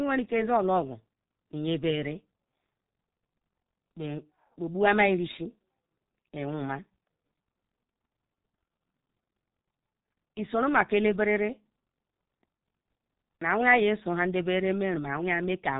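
From start to finish the speech carries heavy G.723.1 codec damage, consistent with the low-rate 6.3 kbit/s mode. The coder models the voice in 30 ms frames and refreshes that model slowly, so consonants smear together and the tone turns muffled and hoarse. A spectrogram shows a hard ceiling with nothing above 3.8 kHz, blocky frame-to-frame texture, and harmonics that look blurred rather than crisp. The waveform looks smoothed, with softened onsets.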